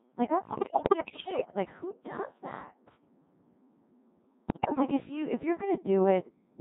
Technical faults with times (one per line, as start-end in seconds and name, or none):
0.00-6.61 Codec 2 vocoder
0.48-1.54 bit errors on digital voice radio
4.48-4.82 bit errors on digital voice radio